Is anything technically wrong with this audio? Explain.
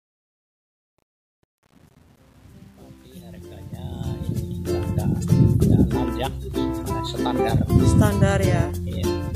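Yes. There is truncation distortion on the fade-in, from 0.0 to 4.76 s, worst up to 4.09 s. The fade stage drops low bits without dither, which fits a 9-bit stage. Quiet levels collapse into square steps. The start sounds gritty until the fade completes at 4.75 s.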